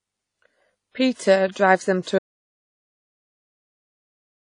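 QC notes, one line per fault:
Throughout: WMA compression, likely the cause of the ringing, washy texture, with hiss that swells and fades with the speech. Nothing is present above 10.1 kHz, consistent with a low bitrate near 32 kbps. The damage is plainly audible and sits in the spectrum, unlike clipping or hum.
1.14 to 1.19 s and 2.03 to 2.07 s: pre-echo, a short hiss arriving about 47 ms and 41 ms ahead of two sharp onsets. The codec spread noise sized for each attack across its whole block, so the hiss precedes the attack and the onset sounds smeared rather than crisp.
2.19 s to the end: audio dropout to silence. The speech stops mid-flow and silence follows with no room tone, likely because the input was lost while recording continued. Everything after that point is missing, which sets it apart from a fade or a gate closing.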